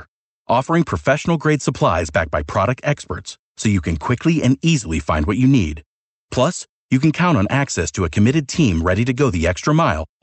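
No faults in the speech; the call path shows as a top end that stops near 8 kHz, which fits an Opus link at about 40 kbps.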